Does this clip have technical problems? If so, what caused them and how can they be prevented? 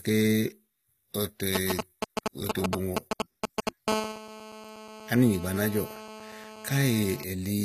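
Yes. Throughout the speech, the treble sounds synthetic, s sounds gritty and lispy, and nothing is present above 14.9 kHz. This is likely HE-AAC compression, where the encoder rebuilt the treble from copied lower bands, which fits a low bitrate around 20 kbps. Encoding at a higher bitrate, or with plain AAC instead of band replication, would prevent it.

From 1.55 to 3.69 s, a nearby 2G phone sends GSM signalling bursts, which the audio circuit rectifies into a galloping dit-dit pattern of short 217 Hz buzzes roughly as loud as the speech. Keeping phones away from microphones, cables and interfaces, or switching them to airplane mode, would prevent it.

From 3.88 to 7.24 s, a nearby 2G phone is in a call and transmits steadily at 217 Hz. The rectified pulses produce a hard, raspy GSM phone buzz rich in harmonics, about 11 dB below the speech. Shielded, balanced cabling and keeping phones at a distance would prevent it.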